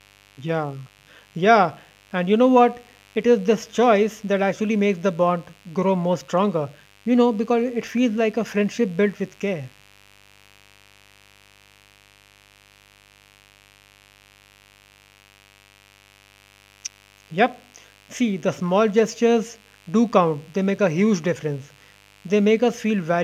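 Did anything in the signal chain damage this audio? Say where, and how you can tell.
Yes, mains buzz runs under the whole speech clip: a raspy 50 Hz buzz, roughly 35 dB down, from switching spikes getting into the analogue wiring.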